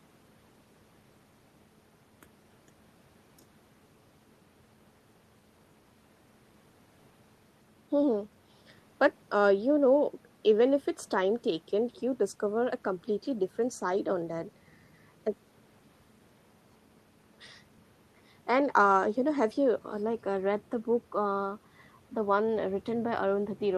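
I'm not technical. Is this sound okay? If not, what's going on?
Yes, nothing wrong here.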